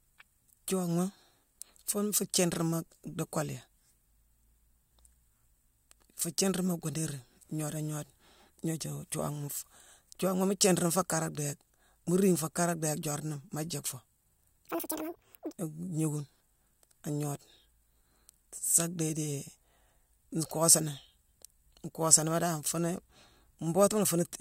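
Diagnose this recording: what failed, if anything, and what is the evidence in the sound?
A section at the wrong speed runs from 14.67 to 15.53 s. The speech plays at double speed, hurried and pitched up by roughly ten semitones. Speed and pitch rise together, so the likely cause is a playback or editing clock mismatch rather than pitch processing.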